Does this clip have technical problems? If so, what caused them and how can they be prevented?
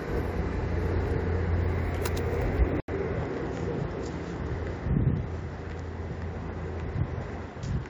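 Yes. At 2.80 s the sound breaks off for 80 ms, then returns slightly quieter, duller, and band-limited, with nothing above 7.3 kHz and a new faint noise floor through to the end. This is likely an input switched to a poorer device. A spectrogram shows a sharp ceiling at 7.3 kHz after the gap, and the waveform shows a brief flat line and a small drop in level. To prevent this, lock the recording input to one device and disable automatic switching to headsets or other microphones during capture.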